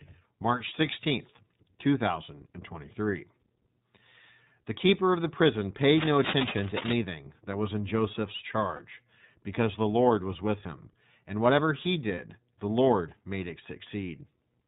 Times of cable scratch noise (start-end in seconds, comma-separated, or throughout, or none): 5.97-6.92